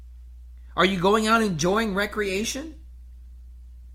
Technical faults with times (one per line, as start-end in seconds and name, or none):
1.30-3.94 adaptive stream at a lower bitrate